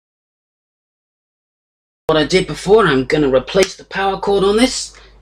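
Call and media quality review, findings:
Audio dropout to silence, 0.00 to 2.09 s. Already under way when the clip opens: silence, no room tone, then sound enters abruptly mid-flow at 2.09 s. Input path likely lost, whether a disconnected device, a failed link or a stray mute, while the recorder kept writing silence. Content from that first stretch is unrecoverable.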